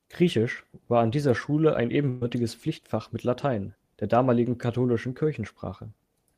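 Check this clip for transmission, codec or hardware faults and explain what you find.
One transmission fault is present in the speech. A burst of packet loss from 2.09 to 2.22 s drops about 120 ms. Concealment stretches and fades the last sound, appearing as smeared, decaying bands before speech resumes further on.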